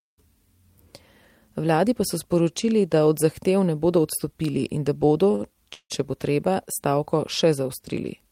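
At 5.31 and again from 5.35 to 5.42 s there's a pair of short stalls from a late packet. The jitter buffer ran dry, so the last bit of sound got stretched by about 19 ms and then 49 ms. You hear a slightly held, faintly buzzy smear, but nothing's actually lost.

Then from 5.74 to 5.92 s comes a call audio freeze, likely from packets held up in transit. The sound trails off into a fading buzz that drops to silence for about 60 ms before picking up right where it stopped. That adds roughly 157 ms of gap, with nothing missing.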